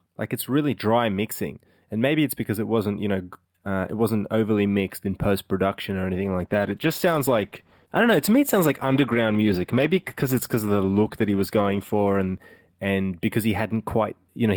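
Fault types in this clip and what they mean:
call bitrate drop: after "in post production or", at 6.24 s, the speech turns coarse, watery and muffled as the encoder is starved of bits. This fits a fall from about 64 kbps to about 13 kbps. The worst stretch lasts about 5.7 s, and it recovers by 13.79 s.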